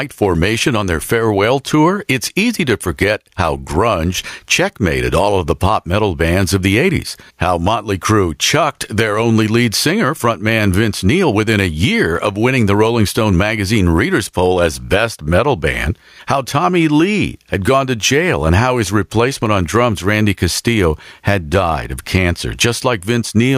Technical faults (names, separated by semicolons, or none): gain pumping